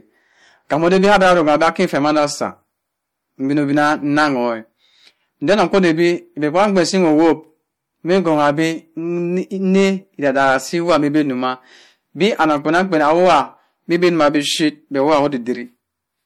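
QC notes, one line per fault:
Throughout, hard clipping: the signal was overdriven by about 13 dB, so roughly 2% of samples went past the clipping limit and peaks flatten into harsh crackle.
Throughout, MP3 compression: a likely low-bitrate MP3 encode, consistent with about 64 kbps, leaves nothing above 18.9 kHz and gives the speech a watery, swirly texture.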